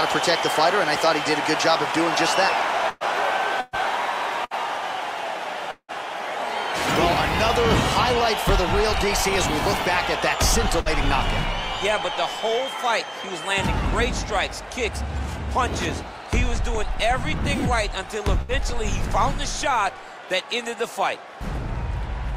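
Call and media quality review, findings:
Burst of packet loss at 2.89–3.03 s, 3.60–3.76 s, 4.45–4.54 s, 10.80–10.88 s and 18.41–18.52 s. Receiver concealment holds and fades the last sound as a buzz or hiss, then playback resumes later. About 120 ms missing at the first two, about 60 ms at the rest.

Long network dropout at 5.71–5.91 s. Concealment fill fades out, then a short silent stretch of about 70 ms. Audio returns later with about 180 ms missing. Likely cause: a gap in packet arrival too long for the jitter buffer to conceal.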